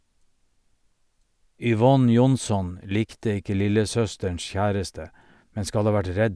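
No faults are audible anywhere in the speech.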